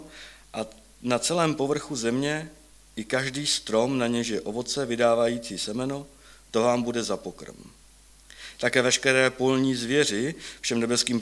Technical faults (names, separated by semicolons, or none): none